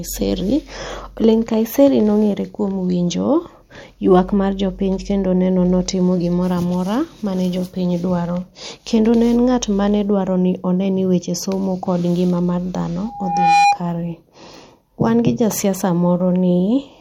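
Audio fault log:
13.05–13.80 s, loudspeaker feedback squeal: just after "mar dhano" a pure tone near 813 Hz swells over roughly half a second until it sits about 5 dB above the speech. The microphone is hearing its own loudspeaker, and at that one frequency the loop gain tops unity, so the tone keeps feeding itself. A spectrogram shows a single bright horizontal line at 813 Hz thickening as it grows. The waveform shows a rising sinusoidal envelope swamping the speech.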